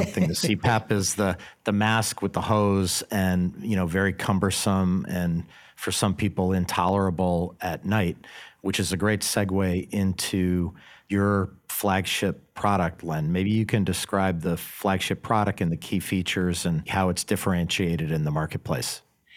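Clock drift buffer slips run from 1.45 s, just after "is the", to 19.14 s, heard as a regular click every 1.36 s, about fifteen times. Two devices likely run on separate clocks around 150 ppm apart, so the buffer drops or repeats a handful of samples.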